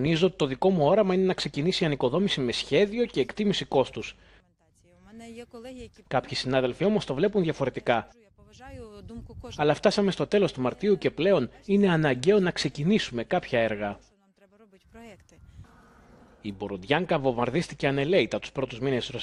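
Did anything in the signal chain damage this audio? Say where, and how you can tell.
No signal-chain damage is audible.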